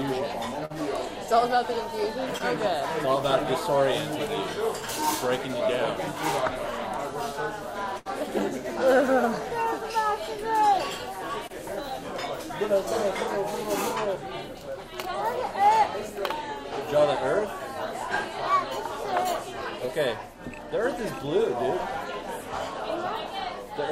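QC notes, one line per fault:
0.65–0.72 s and 7.98–8.07 s, burst of packet loss: a run of audio failed to arrive, about 40 ms and then 80 ms. The receiver stretched the last sound for 45 ms and 77 ms, fading it before jumping ahead. On a spectrogram this shows as a frozen, dimming band; on the waveform, a tapering envelope with an abrupt restart.
2.38–2.42 s, 11.47–11.51 s and 19.85–19.90 s, short concealed packet loss: about 20 ms was missing each time and was patched with roughly 20 ms of continued sound, then crossfaded back. Each heard as a brief smear or wobble. The spectrogram shows a thin, blurred vertical slice; the waveform shows a short smoothed patch.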